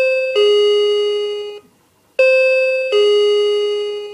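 No technical faults can be heard anywhere in the audio.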